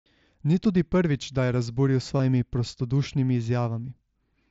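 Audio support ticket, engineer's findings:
Concealed Bluetooth headset packet loss at 2.17–2.20 s and 3.81 s. Short buzzy repeat, slight warble on return. Lost headset packets patched by repeating recent waveform.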